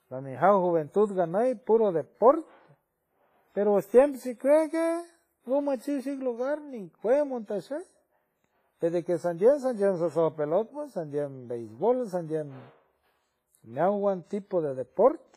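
Throughout the speech, likely WMA compression at a low bitrate, fitting roughly 24 kbps, spreads quantisation noise across tens of milliseconds and zeroes weak spectral lines. The heavy damage sounds ringing and washy, with hiss that breathes with the signal.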